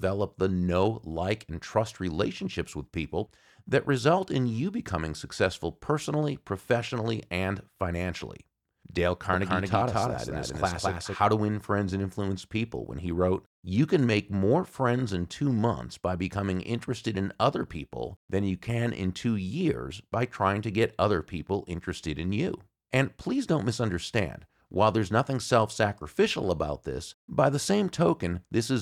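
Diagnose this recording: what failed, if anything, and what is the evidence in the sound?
A doubled audio track appears from 9.33 s to 11.15 s: the speech is heard twice, with a second full-band copy trailing the first by around a fifth of a second at roughly the same loudness. The copy has no decay or room colouring and cuts in and out abruptly at both ends, which rules out an acoustic echo. The stage is likely the capture or edit chain, with a second, slower path or a misaligned duplicate mixed onto the same track.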